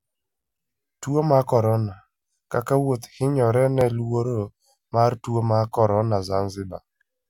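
At 3.81 s this speech clip has a single jump, with the sound skipping forward slightly instead of flowing on, and no gap of silence around it. The likely cause is a dropped buffer (overrun): the recording software failed to collect a block of samples before the hardware overwrote it, so only a few milliseconds went missing and the audio on either side was butted together, leaving that abrupt discontinuity.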